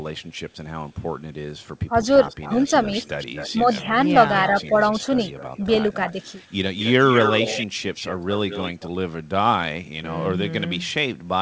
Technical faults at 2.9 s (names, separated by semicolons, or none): echo leak; speech suppressed in double talk